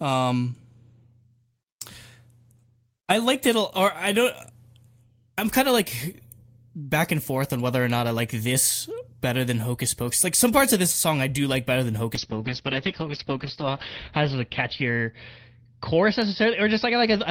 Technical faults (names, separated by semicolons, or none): call bitrate drop